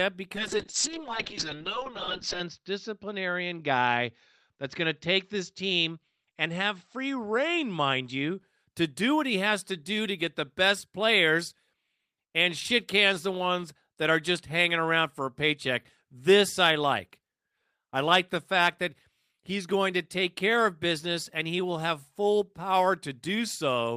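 Speech, with a call bitrate drop from 0.37 s to 8.45 s, just before "to do what he". The encoder starved for bits. High frequencies cut off near 8 kHz instead of 20 kHz. The sound turns muffled and rough, worst for about 2 s. It points to a fall from about 32 kbps to 6 kbps.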